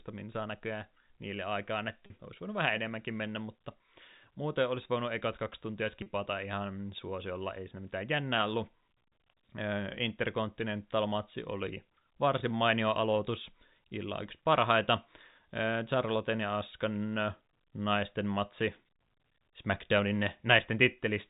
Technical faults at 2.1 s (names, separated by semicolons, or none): packet loss with pitch repetition